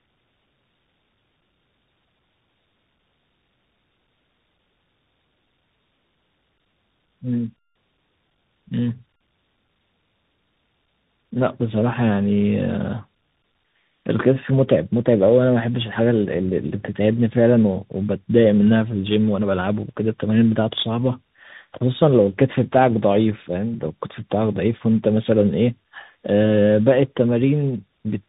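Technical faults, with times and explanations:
Throughout, tandem speech coding: the speech sounds rough, muffled and warbly because it was coded twice in a row, in a way that fits AMR-NB and then CVSD with a G.711 hop between. Each coder compounded the previous one's damage, and nothing reaches above 3.8 kHz.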